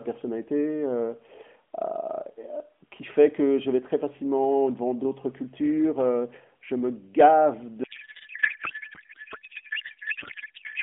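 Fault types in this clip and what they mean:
Codec payload misread: from 7.84 s to the end, the receiver unpacks AMR frames sent in octet-aligned format as if they were bandwidth-efficient, so every field is read from the wrong bits, and the speech turns into garbled noise and warble that barely tracks it.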